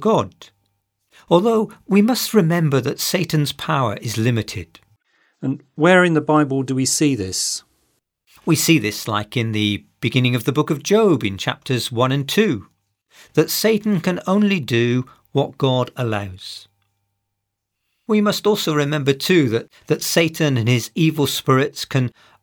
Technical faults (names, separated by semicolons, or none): none